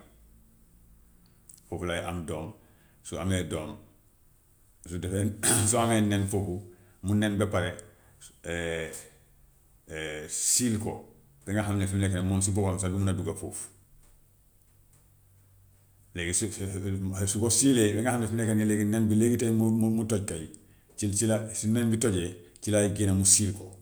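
Speech recording, no technical faults detected anywhere in the clip.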